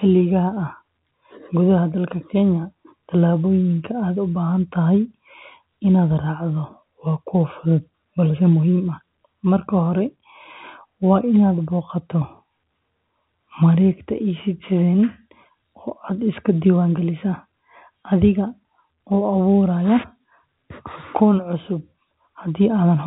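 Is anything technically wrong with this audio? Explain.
No, nothing stood out as technically wrong on listening to this speech.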